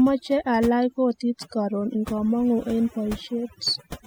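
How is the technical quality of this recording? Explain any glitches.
Overdone noise removal colours the whole recording, from start to finish. A noise reduction stage was pushed too hard, so individual frequency bands sitting near its noise estimate are pulled down or muted, taking the softer parts of the speech with them. The gaps fall to near silence dotted with twinkling specks. Unlike a noise gate, which shuts everything at once, this works band by band, leaving those isolated chirps.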